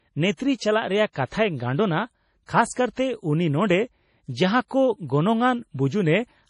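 Throughout the speech, nothing sounds above 10.5 kHz, and the audio turns watery and swirly, with chirping s sounds and smeared onsets. This is likely heavy MP3 compression near 32 kbps: starved of bits, the encoder cuts the treble and toggles weak frequency lines between frames.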